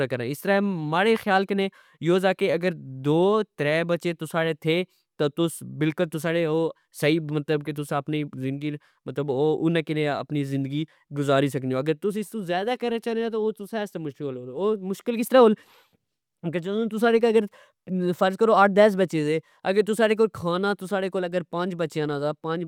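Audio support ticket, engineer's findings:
No faults found on this speech clip; nothing to log against any component.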